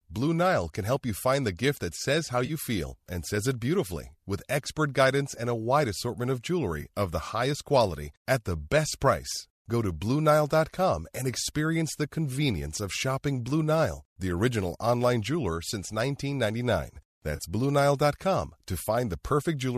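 At 2.46 to 2.51 s, 6.82 to 6.84 s and 17.36 to 17.41 s the speech briefly smears into a noisy, phasey patch. This is AAC frame loss with concealment: blocks of coded audio never reached the decoder, so it filled the gaps by repeating the last good spectrum with randomised phase. The gaps of about 30, 20 and 30 ms fit two or three lost frames of roughly 10 ms each. The light grain throughout likely comes from low-delay AAC coding.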